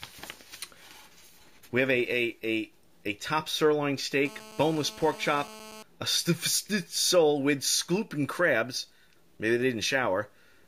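A hard, raspy buzz sits under the sound from 4.25 s to 5.83 s, pitched at about 217 Hz with a dense stack of harmonics, roughly 19 dB below the programme and holding steady throughout. This is GSM phone buzz: a nearby 2G handset transmitting in bursts about 217 times a second, and the audio circuitry rectifying those radio pulses into the signal path. The unbroken, constant level fits a phone in an active call.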